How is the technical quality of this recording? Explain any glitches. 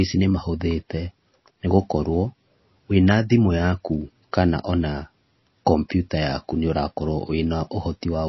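The technical quality is poor because of heavy compression damage that runs through the whole speech clip.

MP3 compression, present throughout: the sound is most likely an MP3 encoded at a very low rate, consistent with about 24 kbps. Starved of bits, the encoder removes all content above 5.8 kHz and discards quieter frequency detail, which then flickers in and out from one frame to the next. The result is plainly audible: dull, muffled treble, a watery, swirling texture, metallic chirps on s sounds, and smeared consonant onsets.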